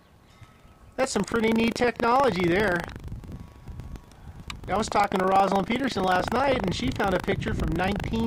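Buffer tearing runs throughout: writer and reader cross within each period, splicing in a small slice of sound from about 150 ms earlier, giving a steady 25 Hz rattle.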